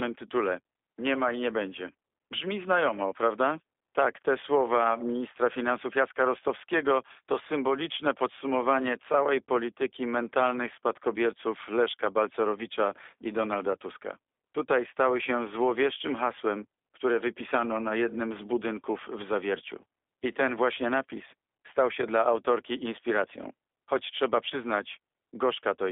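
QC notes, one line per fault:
throughout, G.729 codec: the speech has passed through a model-based coder, consistent with 8 kbit/s G.729A, that rebuilds each 10 ms frame from a vocal-tract filter, pitch predictor and sparse pulses. Nothing above 3.7 kHz survives, so the sound is narrow, plainly rough and synthetic.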